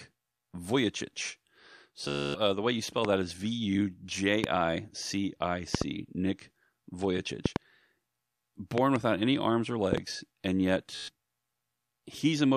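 Speech, with two Bluetooth stutter dropouts. At 2.08 to 2.38 s, just before "uh the way you", the receiver loops its last short slice into a machine-gun buzz for about 0.27 s, which sounds like roughly 19 lost packets, and then picks up further on. At 10.95 to 11.11 s there's a shorter one of about 0.13 s. There's also a run of loud pops, each around 20 dB above the speech, most likely driver or switching glitches. Single pops land at 3.05 s (between "the way you spell" and "that is") and 4.44 s. Double pops come at 5.75 to 5.84 s, 7.46 to 7.58 s, 8.78 to 8.98 s, and 9.93 to 10.00 s (right after "any arms or"), with the speech carrying on underneath.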